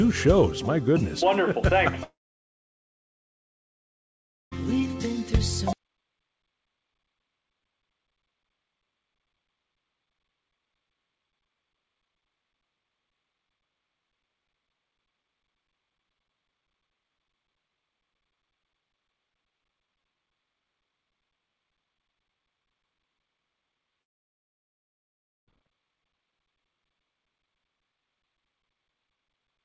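At 2.04 s the sound drops out, and comes back at 4.53 s. That is a long network dropout, likely from a gap in packet delivery. About 2.5 s of audio never arrived. The receiver barely bridged it. Nearly the whole gap is silence. The same happens from 24.01 to 25.48 s, losing about 1.5 s, again almost all silent. Both times the audio resumes without the lost part. Throughout, nothing sounds above 8 kHz, which fits a G.722 call codec.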